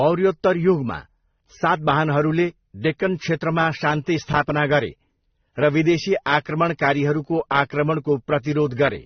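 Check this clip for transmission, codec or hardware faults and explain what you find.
One codec fault runs through the whole speech recording: a hard ceiling at 6.3 kHz, with smeared, swirly highs and a grainy, metallic texture layered together. The likely cause is transcoding between lossy codecs, with the sound pointing to MP3, then Opus, then low-rate AAC-LC. Each stage re-encoded the previous stage's artefacts, and the lowest cut-off survived. A spectrogram shows a flat, empty band above 6.3 kHz and patchy, blocky energy below it.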